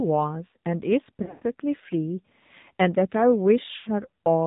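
Throughout, the speech carries AMR narrowband mobile codec damage: the band ends at 4 kHz, and the voice sounds plainly buzzy and synthetic, which fits a low AMR-NB mode near 7.4 kbps. From 1.22 to 1.43 s, lost AMR speech frames total about 180 ms across 200 ms, with a longest run of 120 ms. The decoder stretches the last good pitch and vocal-tract settings, so the sound drags, fades toward silence, and returns rough. At 3.76 to 3.89 s, 100 ms more is lost, again smeared and faded.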